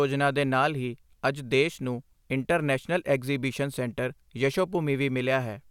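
Speech recording, and nothing on it registers as a technical fault.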